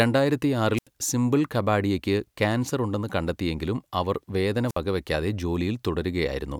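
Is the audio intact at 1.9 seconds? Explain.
Yes, at 1.9 seconds the speech plays through intact, with no audible dropout, click, distortion or other fault at that moment.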